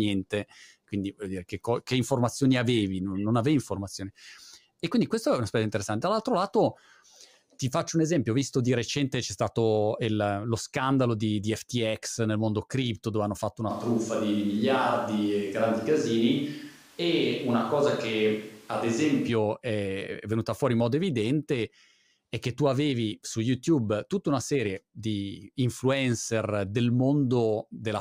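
From 13.71 s to 19.28 s the speech abruptly turns roomy and hollow, with thinner bass and room noise around 30 dB below the speech, though the level barely changes. This is likely a switch to a distant microphone after the close mic dropped out, reverting sharply at the end.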